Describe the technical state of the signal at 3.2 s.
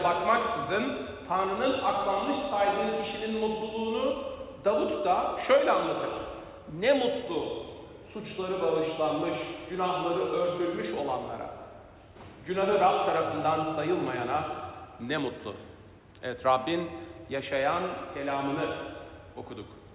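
At 3.2 s the audio is intact, with no dropout, glitch or distortion, only the narrow telephone-band sound of the call path, where nothing reaches above 4 kHz, which fits a G.711 mu-law codec at 64 kbps.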